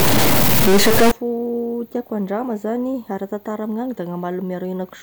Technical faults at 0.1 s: stuck bit

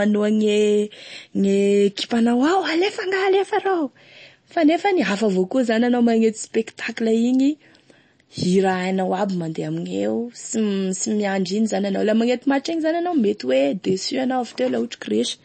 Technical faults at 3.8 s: MP3 compression

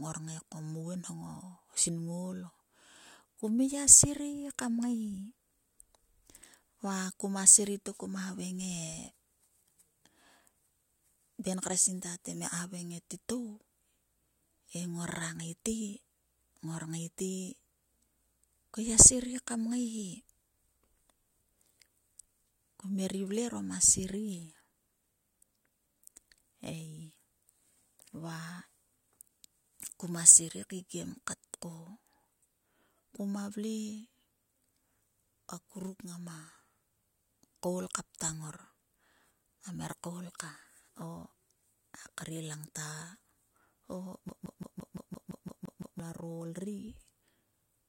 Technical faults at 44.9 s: CD stuck on one turn

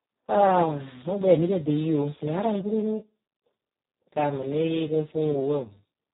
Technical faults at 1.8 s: Speex codec

